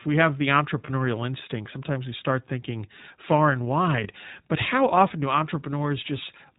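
iLBC codec coding runs through the whole speech clip, and the damage is plainly audible. Nothing above 4 kHz survives, so the sound is narrowband and dull, and the voice takes on a slightly rough, synthetic edge. That is what a low-rate vocoder-style codec produces when it models each short frame's excitation on its own, and the character fits the 20 ms-frame, 15.2 kbps mode.

Lost iLBC frames interrupt it twice: from 0.86 to 0.91 s, between "we have the" and "instinct sometimes we start", and from 4.04 to 4.08 s, between "start thinking far and" and "but how often do". Each gap lasts about 20 ms, which points to a single lost frame. The decoder filled each one by repeating the last pitch cycle mixed with noise, so it comes through as a brief, held, buzzy vowel, and clean decoding returns immediately afterwards.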